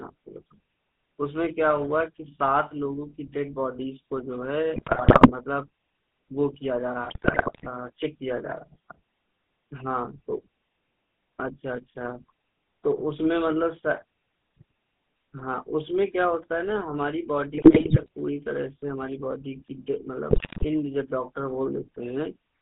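From the start, the whole speech clip carries the sound of the GSM full-rate codec. The band runs only from about 150 Hz to 3.6 kHz. The codec rebuilds the voice from a vocal-tract model fed by a sparse pulse train. That leaves a plain buzzy, gravelly edge on every syllable. The coarseness fits a 13 kbps full-rate stream.

GSM bit errors break in four times. They occur from 4.76 to 5.31 s, 7.04 to 7.67 s, 17.52 to 18.08 s, and 20.30 to 20.65 s. In each stretch, corrupted bits reach the decoder. Wrong filter, pitch or gain values warp the spectrum frame by frame. The speech turns into squawks, pops and gargling. The last burst has the highest bit error rate, near 8%.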